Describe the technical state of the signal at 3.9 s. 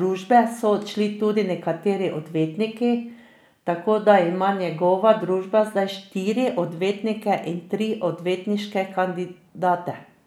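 At 3.9 s the speech signal is intact, with no dropout, clipping, glitch or other fault audible at that point.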